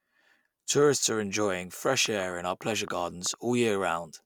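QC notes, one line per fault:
2.06–3.35 s, train of clicks: likely interference or a faulty connection injecting about ten irregular pulses, around 7 per second after "are enjoying", popping out above the speech.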